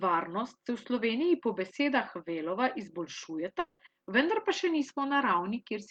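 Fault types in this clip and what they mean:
Long network dropout: from 3.59 s the speech smears into a fading buzz for about 200 ms, then falls briefly silent before "vendar pa še" at 3.82 s, with about 200 ms lost. Unlike a brief packet loss, the decaying fill shows a likely stalled stream.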